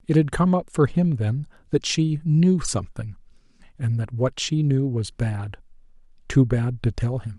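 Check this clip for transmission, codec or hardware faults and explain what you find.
Nothing faulty turns up anywhere in this speech recording.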